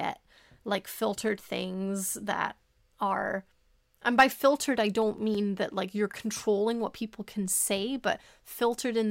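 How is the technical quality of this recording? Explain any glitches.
The recording has one fault: CD scratch ticks, from 5.02 to 5.51 s, just after "and by filtered i" and before "that like you're controlling". Four short ticks repeat at a steady rate, roughly six a second. The longest lasts only a few milliseconds. A scratch on the disc wipes out more data than error correction can rebuild, once per revolution. The player patches or mutes those samples. Each patch is heard as a tick or tiny dropout, and the ticks vary in strength.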